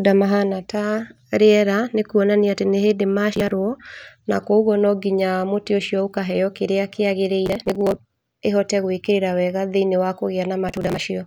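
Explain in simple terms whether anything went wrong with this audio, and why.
The processor fell behind and missed many of its tiny audio deadlines in a row, each dropping a slice of roughly 10 ms. That is processor overload crackle: gritty, tearing crackle at 3.33–3.51 s after "nĩkũonania atĩ nĩ hĩndĩ", 7.46–7.99 s before "ĩhote gwĩkĩrĩra wega", and 10.69–11.01 s.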